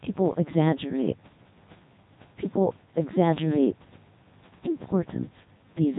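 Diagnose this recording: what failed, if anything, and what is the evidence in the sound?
The speech sounds robotic and buzzy for the whole clip, heavily damaged, with nothing above 3.8 kHz and the room noise about 25 dB below it smeared into the synthesis. This is a codec failure from the Codec 2 vocoder, likely at its 3.2 kbit/s mode. Only pitch, voicing, energy and envelope survive, rebuilt from sine waves.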